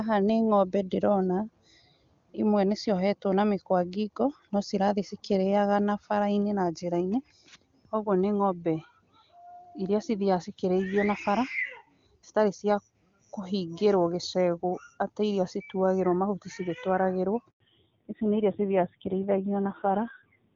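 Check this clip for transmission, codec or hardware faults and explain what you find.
Two faults occur near the end of this speech clip, both tied to a network change.

At 17.50 s there is a handover gap lasting 100 ms, to 17.60 s. The call switched networks and no speech frames arrived during the move. The voice fades out quickly and silence follows until the new link carries sound.

From 17.60 s to the end there is a fallback to narrowband. Before this, the wideband HD Voice sound points to AMR-WB at a high rate, around 23.85 kbit/s. Afterwards nothing above 4 kHz remains. The harsh, rough texture fits AMR-NB at a low rate near 5.9 kbit/s. The voice turns duller and muffled.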